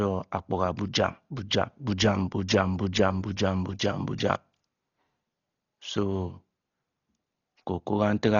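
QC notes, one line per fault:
Throughout: Dolby Digital compression, heavy damage on this speech, likely from an AC-3 style encode at a very low rate, around 32 kbps. Nothing survives above 7 kHz, so it sounds dull, and starved frequency lines refilled with dither noise give a rough, fluttering haze around voiced tones.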